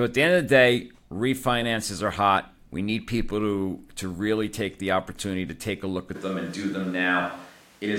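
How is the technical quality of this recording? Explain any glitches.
The recording has one clear fault: a switch to a distant microphone near the end. From 6.17 s, just after "take a look at", to the end of the clip, the signal likely stops coming from the close microphone and comes from one placed further away. The speech turns suddenly roomy and hollow and loses bass. The loudness stays about the same, but room noise becomes audible at about 30 dB below the speech.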